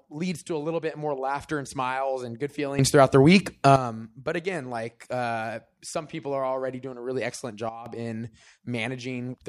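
Sudden gain jumps: 2.79–3.76 s after "and smiles and good", about 12 dB louder; 7.69–7.86 s after "doing a really excellent", about 12 dB quieter. Speech and background noise step together, likely from gain applied without a ramp.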